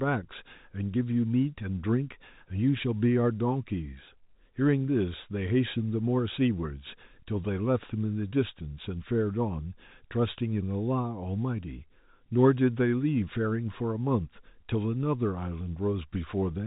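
The speech arrives intact over what sounds like an ordinary G.711 telephone path, with the band closing at about 3.8 kHz and only the faint, level-following grain that 8-bit logarithmic coding leaves behind, nothing in the signal departing from how that channel normally behaves.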